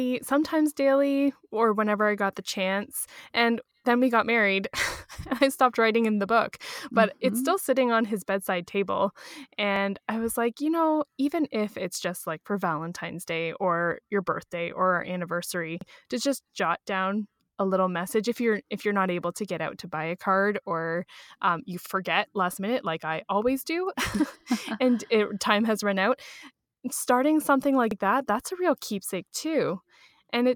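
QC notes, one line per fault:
3.71–3.76, 9.76–9.81, 15.81–15.86, 21.86–21.91, 27.91–27.96 s: overlapping chunks. Every 6 s the next chunk starts 50 ms early, so that slice replays as a stutter, e.g. between "card or um you" and "last minute like i".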